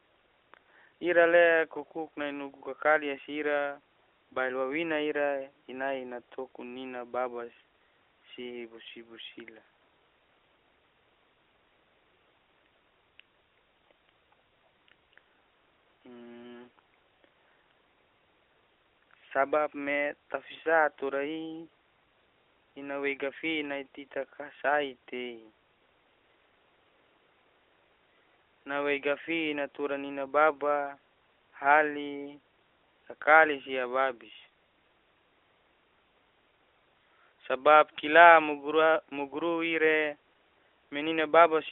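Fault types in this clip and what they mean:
Nothing stood out as a fault on listening to this speech recording.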